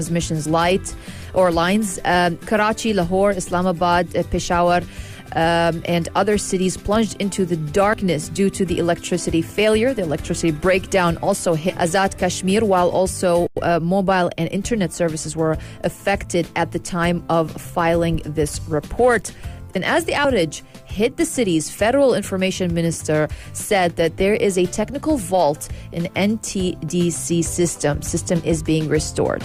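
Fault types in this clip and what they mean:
Skip ahead: at 11.69 s playback leaps forward, dropping roughly 0.4 s of audio, with no silence or concealment filling the join. Unlike a dropout, nothing pauses; the material on either side simply butts together abruptly.
Jitter buffer speed-up: from 12.45 to 13.06 s the receiver trims repeated short pitch-period slices to shrink an overfull buffer, running about 106% speed and removing a few tens of milliseconds. Unlike a resampling speed change, pitch stays put; only pacing hurries.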